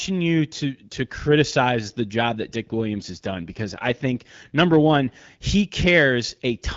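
From 2.95 to 4.26 s there's an AMR rate drop: the wideband codec steps down from 12.65 to 8.85 kbit/s, so the speech turns rougher and more synthetic, with no gap and no loss of band, then recovers just before "number one he".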